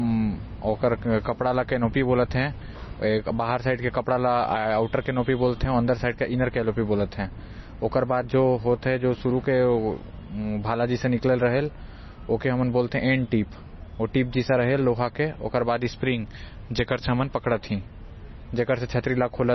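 Throughout the speech the treble stops dead at 5.9 kHz, and what remains sounds watery and swirly, with chirping s sounds. This is likely heavy MP3 compression, fitting a bitrate near 24 kbps. Unlike a plain low-pass filter, weak frequency lines flicker between frames.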